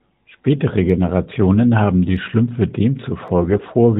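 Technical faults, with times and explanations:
0.90 s, 2.17 s and 3.28 s, dropped samples: Each of these is a single sharp click, a thin vertical line across the spectrum with nothing around it. The likely cause is a tiny bit of the stream going missing, just a fraction of a millisecond, so the waveform jumps straight from one value to a later one. That step is far too brief to remove any audible sound. The step itself is what you hear as the tick.
3.42–3.66 s, AMR bit errors: For about a quarter of a second the speech goes hoarse and gargly, with a scratchy edge, though the pitch and loudness hold roughly steady. The AMR-NB narrowband coding is running at 12.2 kbps with only light damage elsewhere. Through this stretch, though, some of the less protected bits in about a dozen 20 ms frames got flipped on a weak link, at a rate of a few percent. That misplaces the excitation pulses and nudges the finer pitch, gain and spectrum values.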